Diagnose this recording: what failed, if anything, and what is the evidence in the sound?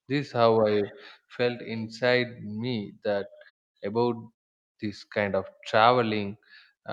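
Nothing in this speech recording points to a failure at any stage of the chain. The background drops away to silence in the pauses and comes back in time for each following phrase, so no speech is lost there.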